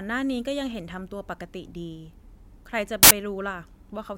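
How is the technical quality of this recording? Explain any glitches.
The speech recording has one clear glitch. From 3.03 to 3.11 s, file tags are played as audio: an embedded cover picture is read as samples, and its compressed bytes come out as very loud white noise. Unlike crackle or clipping, it's flat, featureless static with abrupt edges and no relation to the speech.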